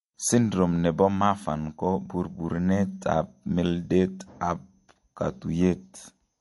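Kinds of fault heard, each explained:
MP3 compression: the speech stops dead above 11.3 kHz and has a plainly watery, swirling texture from weak components flickering, likely from a low-bitrate encode around 48 kbps.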